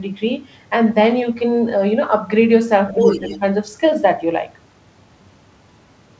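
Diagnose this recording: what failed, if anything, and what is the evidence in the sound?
Other side's voice leaking through from 2.88 to 3.39 s, about as loud as the talker. It's likely a call-processing echo canceller missing loudspeaker pickup at the mic.

Speech suppressed in double talk at 2.93–3.0 s and 3.17–3.41 s, the talker dipping about 5 dB. Likely the echo canceller ducking everything while both sides overlapped.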